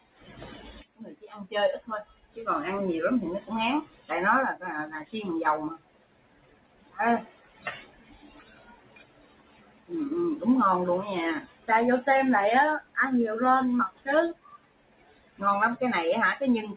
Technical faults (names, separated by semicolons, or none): noise suppressor applied to music or sounds; sound cut by the noise suppressor